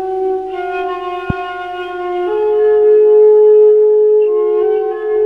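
At 1.30 to 1.32 s there's a single loud pop jumping well above the sound, which carries on underneath, likely a voltage spike from a switch or static.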